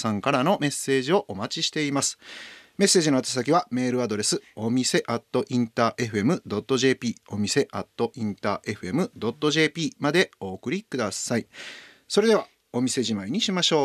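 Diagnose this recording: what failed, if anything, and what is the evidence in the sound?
Listening to this speech recording, nothing stood out that would point to a failure at any stage of the chain.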